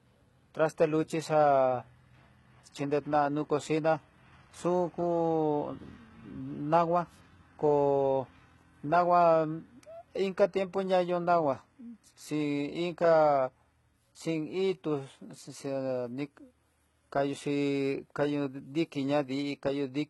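All the way through, the treble sounds gritty and lispy and stops dead at 11.8 kHz, likely HE-AAC compression rebuilding the top end from copied lower bands at around 16 kbps.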